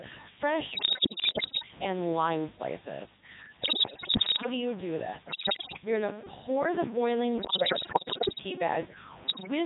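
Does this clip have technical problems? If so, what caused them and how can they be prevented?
Yes. Stuck bit, throughout: distortion with noise filling the pauses, likely from one data bit held at a fixed value by a broken line or converter, so about half the samples are off by its weight. Prevent it by checking wiring and converter output with a test signal.

Codec 2 vocoder, throughout: the speech sounds robotic and buzzy because the 3.2 kbit/s decoder rebuilds the voice from pitch, voicing, energy and a spectral envelope, not the original waveform. Prevent it by using a higher-rate waveform codec where bandwidth allows.

Bit errors on digital voice radio, at 0.71–1.68 s (before "and lime slices"), 3.60–4.46 s (before "do you do this"), 5.28–5.82 s (before "you're going to pour"), 7.38–8.44 s and 9.28–9.48 s: the voice jumps in pitch, level and tone and breaks into bleeps and warbles, because flipped bits, at rates of roughly one in five to one in ten, corrupt whole vocoder frames. 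Prevent them with stronger error protection or by staying inside solid coverage.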